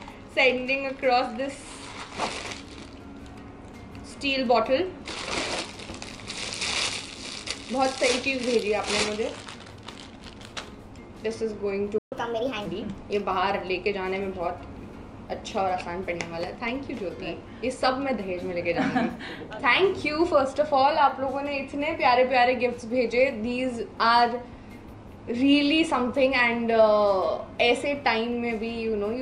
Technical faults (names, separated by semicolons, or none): playback stall; catch-up at higher speed